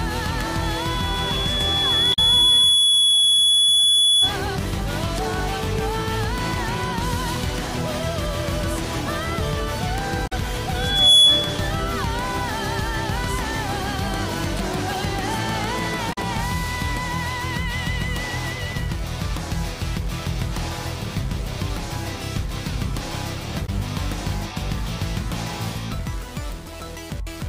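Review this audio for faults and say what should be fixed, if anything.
Loudspeaker feedback squeal at 0.62–4.37 s and 10.76–11.69 s. A 3.4 kHz tone rises as the microphone re-amplifies its own loudspeaker. Lower monitor gain or move the microphone.

Damaged data in a compressed stream at 2.10–2.19, 10.24–10.33, 16.09–16.18 and 23.63–23.69 s. Corrupt frames make the decoder lose sync. Verify file transfers with checksums.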